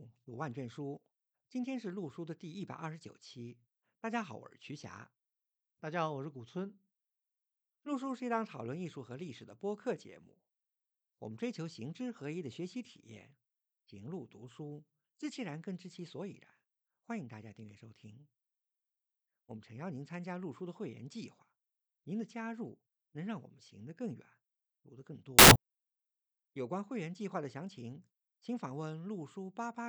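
At 25.39 to 25.56 s, a burst of samples built from the wrong bytes: the bytes are mis-assembled, so noisy low bits become each value's top. It sounds like loud, harsh broadband noise, shows as a dense waveform block and flat broadband spectrogram smear.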